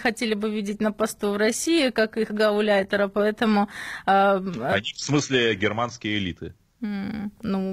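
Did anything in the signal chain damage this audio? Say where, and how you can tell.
Yes: an adaptive stream starting at a low bitrate (network stage). Treble sounds synthetic until 6.0 s, then abruptly clears without any gap, which rules out a dropout.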